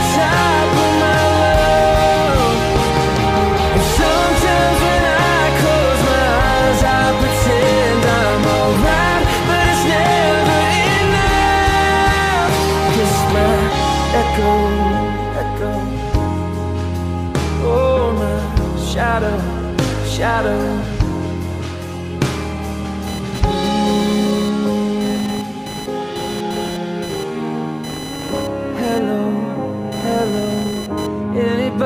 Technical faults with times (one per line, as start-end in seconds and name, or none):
23.07-31.07 computer activity noise